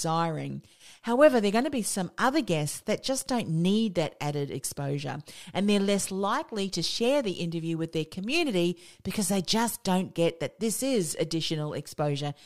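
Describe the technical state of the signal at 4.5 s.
Nothing is wrong with the signal at 4.5 s; the speech there plays through intact, with no audible fault.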